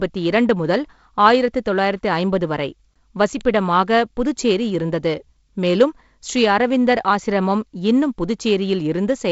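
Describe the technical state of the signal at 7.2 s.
At 7.2 s the speech is intact, with no fault present; what is heard there is the normal wideband telephone coding, which brings a light hiss in the upper band and nothing above about 7.7 kHz.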